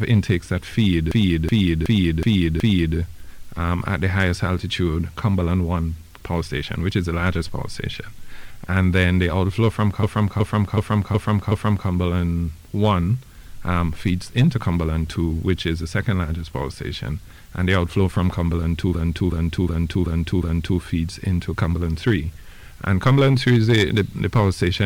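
At 1.12–2.97 s, 10.03–11.89 s and 18.95–20.81 s, a system hang loop replays one 372 ms slice five times, a 2.69 Hz stutter that fits a 16384-sample ring buffer cycling during a freeze. The waveform shows identical blocks, and the spectrogram shows seams at each restart.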